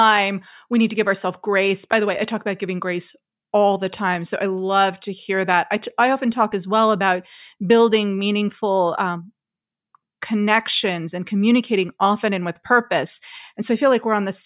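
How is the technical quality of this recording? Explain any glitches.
No technical glitches can be heard anywhere in the recording, and the signal stays steady and intact throughout.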